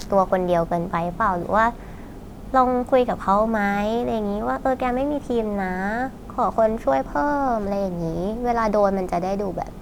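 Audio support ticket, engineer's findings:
No audible faults found.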